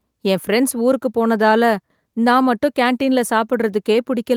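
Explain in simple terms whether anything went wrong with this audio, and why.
Nothing went wrong with this speech recording. At no point is there a problem to hear, so there is nothing that needs explaining.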